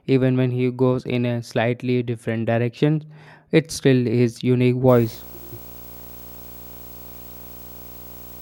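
From 4.88 s to the end of the speech, video or display buzz sits under the signal, roughly 20 dB down: a screen or video cable is coupling into the audio line. It sounds like a rasping 59.94 Hz buzz with hash above it, plus a whine at 15.7 kHz from the line scan. A spectrogram shows harmonics stacked at 59.94 Hz spacing and a thin horizontal line at 15.7 kHz, and the waveform carries a steady raised floor.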